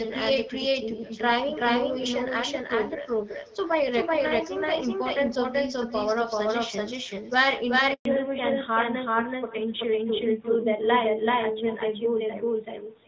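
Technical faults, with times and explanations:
Throughout, doubled audio track: a second, equally loud, dry full-band copy trails roughly 0.4 s behind, likely from the same audio being captured twice by a slower path.
Throughout, echo with no canceller: a faint, thin shadow about 25 dB down follows the talker's voice, roughly 0.4 s late, as the far loudspeaker feeds the microphone unchecked.
7.93–8.05 s, handover gap: the sound dies away and is silent for 120 ms while the call switches networks and no speech frames arrive; that audio is lost.
8.05 s to the end, fallback to narrowband: everything above 4 kHz disappears and the sound turns duller and rougher, as the call drops from HD Voice to a narrowband codec.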